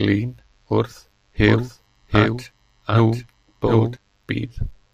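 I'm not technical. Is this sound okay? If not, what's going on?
No, it isn't quite right. From about 1.48 to 3.96 seconds you hear a second copy of the speech trailing behind the first by roughly three quarters of a second, a bit quieter, like a dry echo with no room sound to it. It switches on and off suddenly. This is a doubled audio track, likely caused by the same recording being picked up twice, once through a slower route, so both versions end up mixed together.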